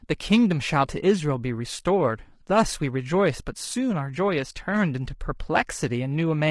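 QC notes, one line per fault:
Throughout, low-delay AAC compression: the speech sounds rough and grainy, with a noisy haze between the pitch harmonics and an artificial-sounding top band. The likely cause is AAC-ELD, whose short frames of about 10 ms resolve harmonics poorly. The plainly audible damage points to a low bitrate near 32 kbps. On a spectrogram, harmonic stripes look smeared with speckled energy filling the gaps, and the upper band looks blocky and patterned rather than natural.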